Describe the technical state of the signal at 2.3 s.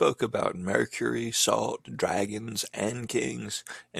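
At 2.3 s the speech signal is intact, with no audible fault at that moment.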